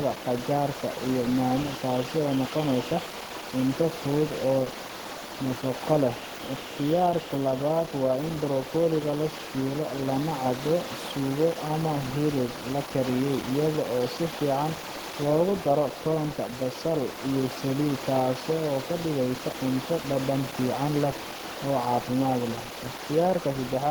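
Opus compression runs through the whole recording. The speech sounds hoarse and grainy, with a plainly audible roughness, which fits the codec's hybrid speech mode at a low rate near 16 kbps. The likely cause is bit-starved Opus encoding, though the bandwidth stays full, reaching about 20.1 kHz.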